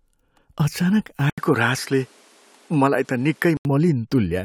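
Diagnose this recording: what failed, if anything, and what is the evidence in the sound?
From 1.30 s to 3.65 s the speech turns duller, with nothing above 13 kHz, after a brief 80 ms gap. A faint new background noise appears while the level stays about the same. At the driver stage, the input likely switched to a poorer device.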